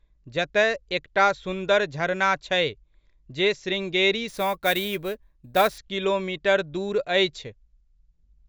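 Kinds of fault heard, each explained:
Imaging from sample-and-hold upsampling: unsmoothed repeated samples mirror the spectrum into 8–16 kHz at about -17 dB as metallic fizz; spectrograms show an inverted copy, waveforms stair-steps.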